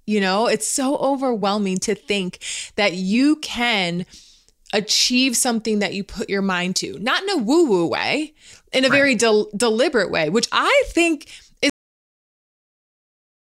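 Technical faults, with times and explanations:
11.70–13.55 s, cut-off end: the final buffers were never written, so speech halts mid-sound after "way which I think" and falls straight into digital silence without decay.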